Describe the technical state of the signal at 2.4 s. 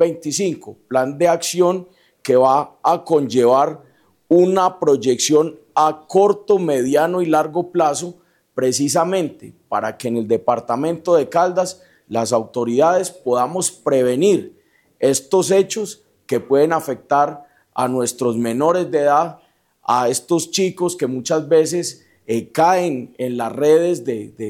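Around 2.4 s the signal is intact, with no audible dropout, distortion or other technical fault at that point.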